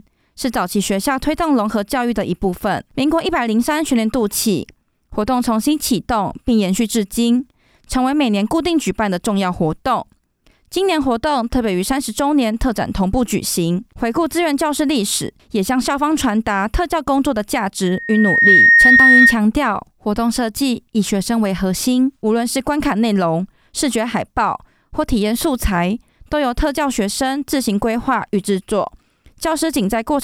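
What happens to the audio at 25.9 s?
Nothing goes wrong at 25.9 s; the audio plays through that moment intact.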